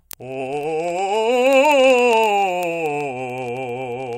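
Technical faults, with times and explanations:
0.11 to 4.17 s: word clock ticks run through the music at a steady rate of about one every 20 ms, some two hundred in all, sharp and uneven in strength. The receiving device runs on its own clock, drifting from the sender's by something like 0.1 percent, so each time the two slip a full sample apart, one sample is dropped or repeated. The strict, regular spacing separates this from random crackle or dropout clicks, which fall irregularly.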